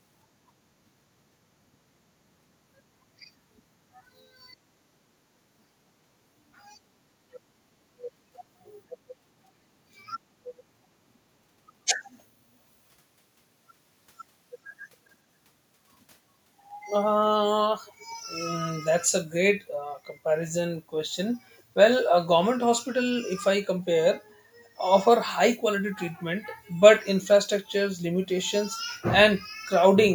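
From 0.84 to 1.42 s, 2.33 to 5.01 s, 5.67 to 6.53 s, 8.11 to 10.46 s and 11.27 to 12.59 s, the background is gated by the echo canceller. It pulls the microphone down hard. The room sound sinks by about 12 to 14 dB, then returns.

At 17.86 to 18.15 s and 21.51 to 21.62 s, a faint, delayed copy of the speech trails it by 403 ms. The second is fainter still. This is likely an echo leak, where the far side's loudspeaker output escaped its canceller.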